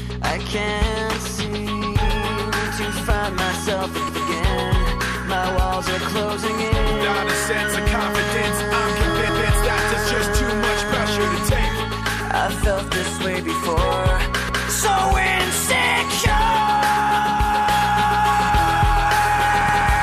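At 9.29, 14.49 and 19.69 s there's a stutter from overlapping chunks: every 5 s a new chunk starts early, so 200 ms of sound plays twice.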